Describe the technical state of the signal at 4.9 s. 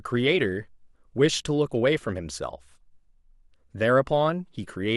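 At 4.9 s the speech signal is intact, with no audible technical fault at that moment.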